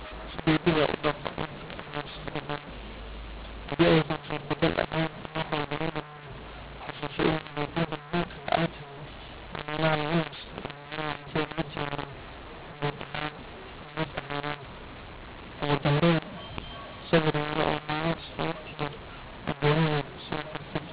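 Harsh, gritty distortion runs through the whole of this speech recording: loud passages crunch and break up, softer syllables lurch in level, and the pauses never fall silent but fill with a steady hiss. The cause is mu-law and A-law mixed up. The telephone audio was written with G.711 mu-law but read back as A-law, so every 8-bit code maps to the wrong level on the logarithmic scale and near-zero samples are lifted well above silence. The band stops at 4 kHz, as expected at 8,000 samples a second.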